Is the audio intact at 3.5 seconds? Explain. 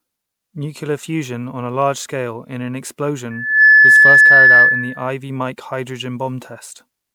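No. A loudspeaker feedback squeal runs from 3.30 to 5.09 s, so 3.5 s falls inside it. A microphone is picking up the loudspeaker it feeds, and at one frequency the loop returns more signal than it receives. That tone feeds on itself. Here a single tone at 1.7 kHz swells over roughly a third of a second into a steady squeal standing about 15 dB above the speech.

Generation loss also affects this moment, as it does the whole clip. The speech sounds swirly, hollow and smeared, with blurred consonant attacks, more degraded than one lossy encode at a bitrate like 128 kbit/s MP3 would leave. The likely cause is the audio being decoded and re-encoded several times. Each pass quantises again on a shifted frame grid, so the noise and the spectral gaps accumulate.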